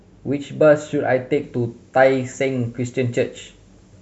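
From 1.44 s to the end of the speech, the treble jumps up: pre-emphasis left on. The high-frequency boost applied for transmission, here matching the FM 50 µs curve, was never undone by the complementary de-emphasis stage, so the top end stays lifted by about 10 dB at 10 kHz relative to 1 kHz. Sibilants turn hard and spitty, and the sound becomes thin and overly bright, with the lower body receding against the exaggerated treble.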